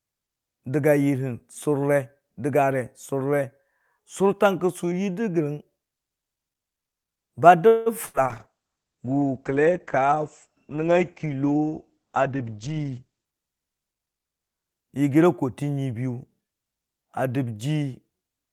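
Speech, with four transmission faults packed into the middle. From 7.67 to 7.89 s the last sound stretches into a fading buzz or hiss for about 185 ms before the speech picks up where it left off with nothing lost, most likely a call audio freeze where delayed packets drained the jitter buffer and the receiver filled the wait. At 8.06 to 8.17 s there is a shorter held, fading sound, and then the speech jumps ahead, a burst of packet loss that dropped 80 ms outright. From 8.30 to 13.33 s the sound turns muffled and rough, a call bitrate drop from 48 to 9 kbps that narrowed the bandwidth from 20 kHz to 8 kHz. From 12.19 to 13.26 s the speech also sounds hurried at unchanged pitch, running at 117% speed, a jitter buffer speed-up trimming short pitch-period slices, roughly a fifth of a second in all, to cut built-up delay.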